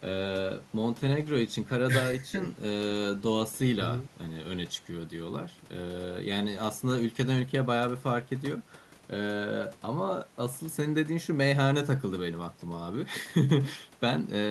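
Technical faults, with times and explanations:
No technical faults can be heard in this speech.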